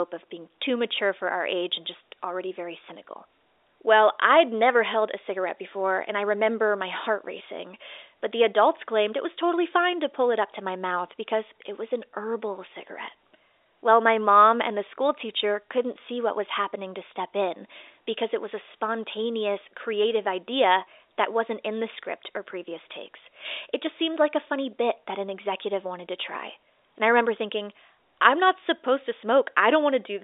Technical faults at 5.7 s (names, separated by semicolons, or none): none